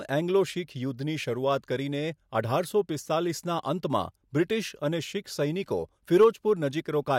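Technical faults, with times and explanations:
Nothing in the speech stood out as a technical problem on listening.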